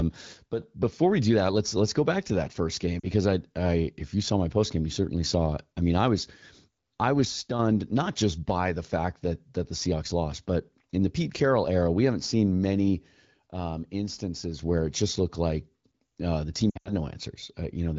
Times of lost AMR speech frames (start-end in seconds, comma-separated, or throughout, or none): 3.00-3.06, 16.69-16.93